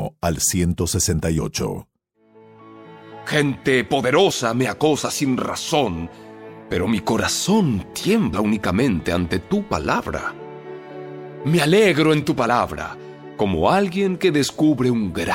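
Compressed frames were skipped four times: each time the decoder left out a single frame of the encoded stream, either because it was missing or because it was rejected as damaged. Each time, the audio jumps forward by about 30 ms, which fits a frame length of roughly 26 ms. Because adjacent frames overlap, each join is a short smeared blip rather than a sharp click. The blips fall at 1.37 s, 4.30 s, 8.32 s and 12.48 s.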